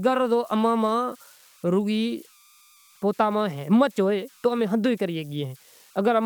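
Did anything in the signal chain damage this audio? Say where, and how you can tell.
Yes, in the converter. Converter idle tones whistle faintly near 1 kHz throughout, about 33 dB under the speech. Undithered delta-sigma patterns cause them.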